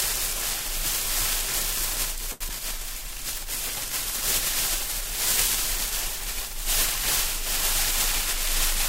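At 2.31 s a short stall from a late packet sets in and lasts until 2.42 s. The next packet arrived too late, the jitter buffer emptied, and the receiver held the last sound for 91 ms before resuming exactly where it had paused. Nothing is lost, but everything after it lands 91 ms later. On a spectrogram the stretch appears as frozen, smeared horizontal bands; the waveform shows a repeating, evenly cycled block.

Just after, at 2.48 s to 2.51 s, comes a short concealed packet loss. Here 20 ms of audio never reached the decoder, and the receiver covered part of the gap with 8 ms of synthesized continuation, extrapolating from the preceding pitch or shaping noise, then crossfaded back into real audio. It is heard as a brief smear or wobble. A spectrogram shows a thin blurred column with a small discontinuity at the rejoin.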